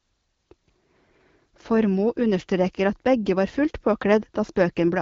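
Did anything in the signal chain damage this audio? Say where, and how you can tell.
No, nothing in the signal chain damaged this audio.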